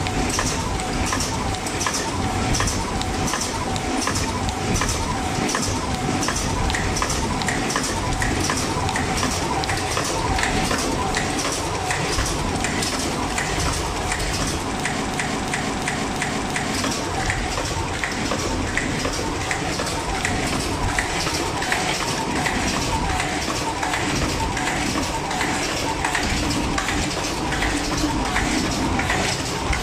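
A system hang loop runs from 15.02 to 16.73 s. The host or driver stalled while the sound hardware kept replaying its ring buffer, so the same 341 ms slice of audio comes back exactly five times, about 2.9 repeats per second. That loop length fits a 16384-sample buffer. Each identical repeat gives a rhythmic, stuck-record stutter, and when normal playback resumes, essentially none of the audio has been skipped.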